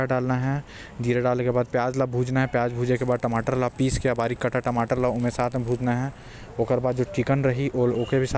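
From 2.96 to 6.28 s the speech carries a 25 Hz buzz of ticks, one every 40 ms, consistent with a resampler restarted on every block, likely a 44.1 kHz to 16 kHz conversion. Each block is converted without its neighbours, leaving an error at every edge.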